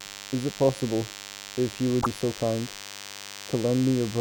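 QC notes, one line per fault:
Throughout, DECT cordless phone buzz: a thin, steady buzz sits under the speech, roughly 15 dB below it. The tone is rich in harmonics, giving it a raspy edge rather than a pure hum. A DECT handset or base station nearby is transmitting a short radio burst 100 times a second, and some part of the audio circuit rectifies each burst. That turns the pulse train into a 100 Hz buzz stacked with overtones.
1.98 to 2.06 s, damaged data in a compressed stream: for about 80 ms the speech is broken by a brief glitch. Part of the compressed stream at this point was corrupted, with bytes lost, zeroed or overwritten. The decoder misread those frames or could not decode them, lost its place, and had to hunt for the next valid frame header before clean audio resumed.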